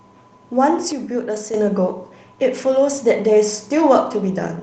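From 0.92 to 1.54 s, a sudden gain jump, likely a gain setting applied without a ramp, drops speech and background noise together by about 7 dB, then restores them abruptly. Within that span, at 1.35 to 1.37 s, one lost packet rebuilt from error correction plays as a low-bitrate 20 ms copy through the Opus call path, sounding briefly rougher and noisier.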